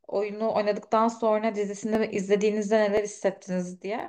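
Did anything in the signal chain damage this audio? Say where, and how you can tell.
Yes. A regular click cuts into the speech at about 0.93 s and recurs every 1.02 s through about 4.00 s, roughly four times in all. The even spacing is the giveaway. This is likely clock drift buffer slips at the driver or buffer stage. Two devices run on independent clocks that disagree by several hundred parts per million, so the buffer between them creeps until a few tens of samples are dropped or repeated. Each of those jumps is heard as a click.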